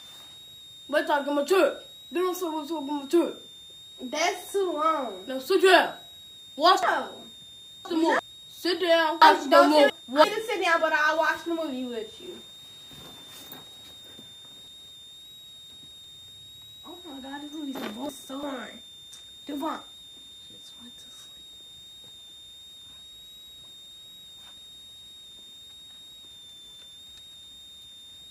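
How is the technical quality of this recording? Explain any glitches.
The recording has two problems: a steady whistle and several jumbled passages.

A switching supply whistle runs throughout. It is a thin high tone that wanders between 3.57 and 3.83 kHz, about 25 dB below the signal. A power supply cycling at an audible rate produces it.

Chunks play out of order at 6.83–8.19 s, 9.22–10.24 s, 14.68–16.04 s and 17.75–18.43 s. Each passage sounds briefly scrambled. The 341 ms pieces point to a late buffer being written behind later audio.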